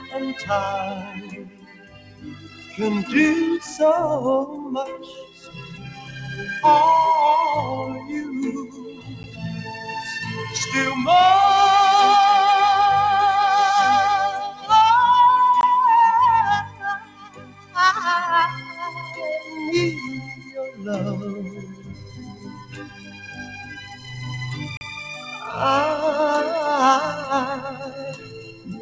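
A speech-tuned noise suppressor acts on this sound from start to finish, treating steady tones and decaying tails as noise. Its gain swings by about 15 dB, so held material pumps and thins while sharper onsets come through at fuller level.

Sound cut by the noise suppressor shows up as distinct dips at 0.99–2.79 s, 4.98–6.16 s, 8.67–9.41 s, 14.46–14.70 s, 16.63–17.76 s, 20.3–20.8 s, 21.56–24.17 s and 27.73 s to the end. In each, sustained parts sink by about 10 to 15 dB, with the deepest drops near 1 s and 17 s.

Blocks of digital silence sit at 9.23 s (10 ms), 15.61–15.63 s (20 ms) and 24.77–24.81 s (40 ms). Each time, the output fell to silence with no fade, likely because the buffer was not filled in time. The shortest block is a tick and the longest a brief hole.

Everything passes through a call path with nothing above 8 kHz, consistent with G.722.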